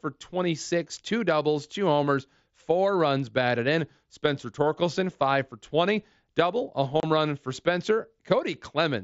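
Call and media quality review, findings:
Unconcealed Bluetooth headset packet loss, 7.00–7.03 s, between "double a" and "run for". A 30 ms hard-edged dropout. Lost headset-to-phone voice packets were replaced by silence or an idle pattern, consistent with about four dropped frames. Waveform shows a gap; spectrogram shows a vertical stripe across the 8 kHz mSBC band.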